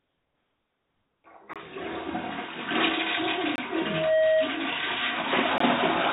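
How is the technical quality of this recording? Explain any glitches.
The recording has three kinds of glitch, heard over a narrowband call path that carries nothing above 4 kHz, which fits a G.711 telephone codec.

From 0 to 1.24 s the background is a smooth, featureless hiss about 4 dB quieter than what follows, with none of the texture of a real room. This is likely comfort noise in place of the background: the sender paused transmission while nothing loud was detected, and the receiver filled that stretch with synthetic noise.

At 1.53–1.56 s, 3.56–3.58 s and 5.58–5.60 s the sound drops out for about 23 ms each. These are gaps between chunks: the audio was handled in 2-second blocks, and a small silence was inserted at every join.

From 3.73 to 4.56 s a steady tone at 633 Hz swells over roughly 0.4 s until it sits around 5 dB above the rest of the sound. This is loudspeaker feedback squeal: a microphone picked up its own loudspeaker, and at that frequency the loop's gain exceeded one.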